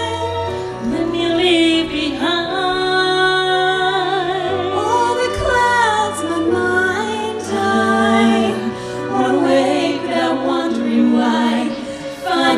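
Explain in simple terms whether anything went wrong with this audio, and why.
Nothing went wrong here; there's no glitch, dropout or distortion anywhere to point to, so there's nothing to explain.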